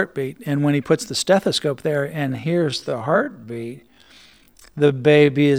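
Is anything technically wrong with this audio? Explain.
Yes. From 2.24 s, right after "puts the stethoscope there", to the end, there's a time-stretched section. The speech slows to about 0.58 times its pace with unchanged pitch and drags, likely from software repeating short slices to lengthen it.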